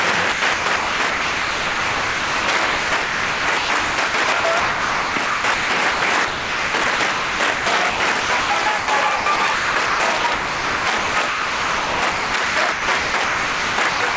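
Gain pumping runs through the whole clip. The level swings by about 15 dB. The likely cause is input gain set far too high, with a fast limiter repeatedly clamping it.

Sound chopped by the voice detector appears in three stretches: 0.32 to 6.02 s, 6.28 to 8.88 s, and 9.16 to 14.17 s. Within them, roughly 4 s, 1.4 s and 3.4 s of real sound give way to comfort noise. The result is choppy, likely from a sender-side detector toggling transmission. Everything above 8 kHz is absent, which points to a 64 kbps G.722 call path.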